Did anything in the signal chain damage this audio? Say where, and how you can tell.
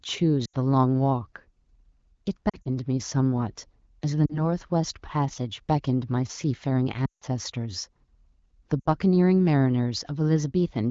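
Yes. Lost AMR speech frames in the network stage, at 0.45–0.54 s, 2.49–2.69 s, 4.25–4.48 s, 7.05–7.25 s and 8.80–8.88 s. Each gap is 40 to 160 ms. At 2.49 s the losses are scattered over 160 ms, with no stretch longer than 40 ms. The sound smears, holds its pitch and fades. The longest, about 160 ms at 7.05 s, drains to near silence, which fits eight consecutive 20 ms frames concealed by the decoder with falling gain.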